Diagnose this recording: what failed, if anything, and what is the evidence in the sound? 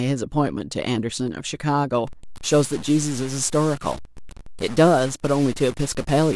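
From 2.07 s to the end, the speech turns harsh and buzzy, and the pauses fill with a gritty noise that sits at a fixed, fairly high level, around -30 dBFS. That points to a stuck bit, likely a broken data line or converter output holding one mid-weight bit at a constant value. Small values of one sign land a full bit-weight off, so silence gets noisier rather than cleaner. Clipping would leave the pauses quiet.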